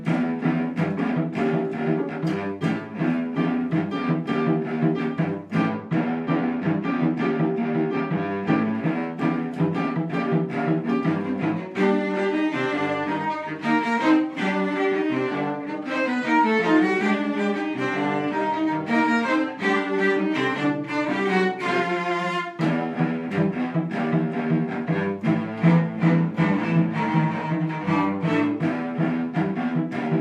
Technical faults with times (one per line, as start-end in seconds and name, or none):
5.69-8.75 channel delay (comb filtering)